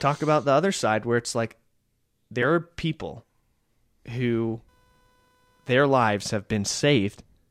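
A faint buzzing chirp, roughly 500 Hz and about 40 dB below the speech, runs from 4.24 to 6.24 s: computer activity noise, processor or graphics load disturbing the audio ground.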